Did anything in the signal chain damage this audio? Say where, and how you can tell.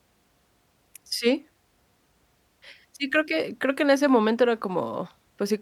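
No, nothing along the way seems to have harmed this speech recording, and there's nothing that points to trouble at any stage of the chain.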